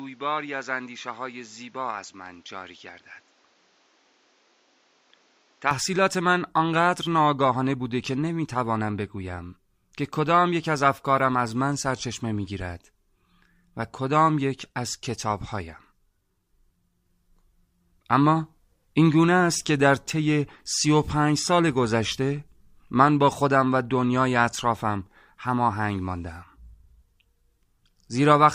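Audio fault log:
0.00–5.71 s, input switched to a poorer device. Nothing sounds above 7.6 kHz, so the speech is dull and boxy. It is about 5 dB quieter, over a new noise floor about 35 dB down. At 5.71 s it clears without a gap, likely a return from a narrower-band microphone.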